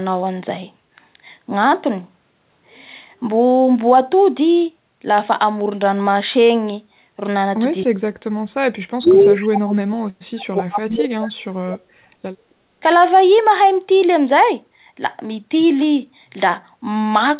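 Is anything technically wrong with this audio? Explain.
Yes. There are three related faults, all from the echo canceller on a hands-free call.

Speech suppressed in double talk occurs three times: 7.84–8.45 s, 8.91–10.01 s and 10.28–12.16 s. The speech drops sharply, by up to about 40 dB at its deepest, and some stretches nearly vanish. This is likely the canceller hearing both sides at once, failing to separate this talker from loudspeaker echo, and turning everything down.

An echo leak sits inside the second suppressed stretch, at 9.06–9.26 s. A faint copy of the speech, about 20 dB below it and delayed by roughly 274 ms, is audible. It is likely loudspeaker sound that the canceller failed to remove before sending the microphone signal back. The fixed delay and the distinct repetition separate it from room reverberation, which would trail on smoothly rather than repeating.

Background gated by the echo canceller occurs at 12.44–12.72 s, just after the last suppression. 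The room noise dips by about 17 dB for roughly 0.3 s and then returns. The canceller clamped the microphone while the loudspeaker played and then released it. This differs from double-talk suppression because only the ambient bed drops, briefly, with no speech being cut.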